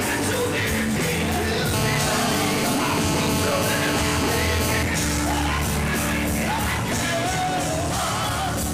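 From 1.74 to 4.83 s there's GSM phone buzz: a nearby phone on a call, bursting 217 times a second, gives a steady raspy buzz about 5 dB under the sound.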